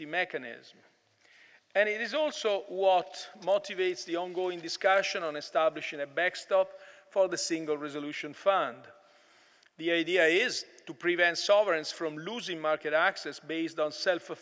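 From 3.42 to 5.38 s, a resampler restarted on every block converts 24 kHz to 16 kHz in 20 ms chunks, each edge missing its true neighbours. This gives a 50 Hz buzz under the signal, seen as evenly spaced vertical lines on a spectrogram and tiny steps every 20 ms in the waveform.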